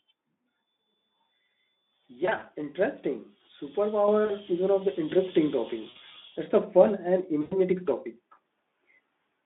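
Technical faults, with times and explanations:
2.25–2.45 s, 4.25–4.31 s, 5.89–5.96 s, 7.41–7.59 s: VoIP packet loss concealed by the speech codec. The sound smears into a buzzy tone or coloured noise that fades. Lost packets, about 40 to 100 ms per event, were filled by the Speex decoder extrapolating its last pitch and filter at falling gain.
4.08 s and 5.1 s: microphone volume stepped up. Sound and background jump louder together, by about 6 dB and then about 5 dB. The call software judged the input too quiet and raised the device's microphone volume in a single step each time.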